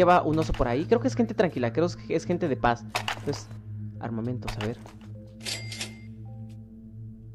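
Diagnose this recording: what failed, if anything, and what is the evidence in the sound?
Nothing failed here that I can pick out. I listened for problems at every stage and didn't hear anything that needs a diagnosis.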